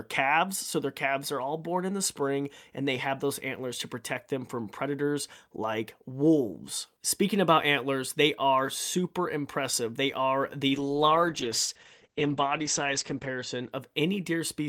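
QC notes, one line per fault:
10.68–13.77 s, call bitrate drop: coding falls from 64 to 11 kbps, treble cut above 8 kHz; rough, watery but unbroken, unlike packet loss, then recovers.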